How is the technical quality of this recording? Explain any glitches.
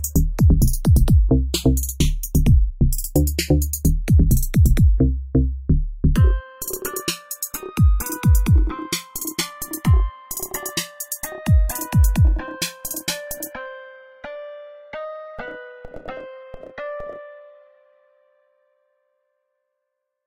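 The recording has one fault, running through the whole clip: the channels drifting apart. The two channels came from devices on separate clocks, one running roughly 100 parts per million off, so their offset grows to about 2 ms by the end. Summed to mono, the comb notches sweep slowly, heard as gradual flanging. Unlike a fixed delay's static coloration, the notches keep moving.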